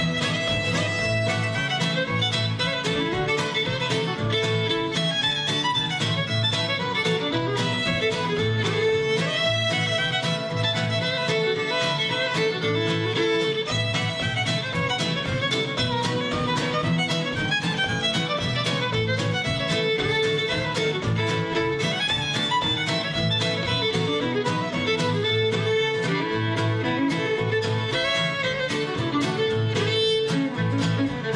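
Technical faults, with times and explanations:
No technical faults can be heard anywhere in this recording.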